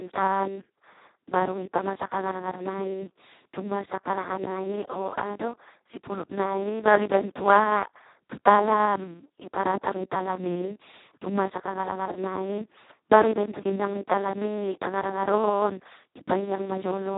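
Speech sounds hoarse, buzzy and close to robotic from start to finish, with nothing above 3.8 kHz. This is heavy Speex codec damage: so few bits reach the excitation that it nears a vocoder, which points to its lowest setting, around 2 kbps.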